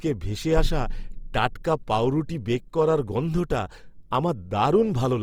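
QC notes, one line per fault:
throughout: Opus compression, likely in its CELT music mode at a low rate near 24 kbps. The speech is plainly rough and grainy, with noise filling starved bands instead of leaving holes, so it lacks MP3's swirl. Bandwidth stays full, reaching about 20.3 kHz.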